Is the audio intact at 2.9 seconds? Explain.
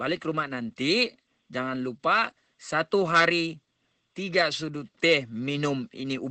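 No, at 2.9 seconds the speech carries Opus voice compression, present throughout the clip. The sound stops at 8.7 kHz and coarse linear-prediction coding of the excitation makes it hoarse and slightly robotic, which fits a low bitrate near 12 kbps, unlike a simple low-pass filter's clean dullness.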